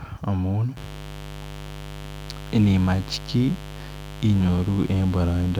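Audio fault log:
0.77–5.59 s, mains buzz: a switching source such as a dimmer or rectifier, or a missing shield, couples sharp spikes into the signal path twice per 50 Hz cycle, and they stay present from 0.77 s to the end. Because the spikes are so abrupt, their energy spreads across a dense stack of 50 Hz harmonics reaching into the kilohertz range. The result is a steady, raspy buzz sitting roughly 15 dB below the speech.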